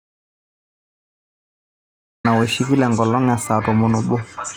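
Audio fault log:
0.00–2.25 s, audio dropout to silence: the clip opens in silence with no room tone, likely from lost input recorded as silence. Speech cuts in abruptly.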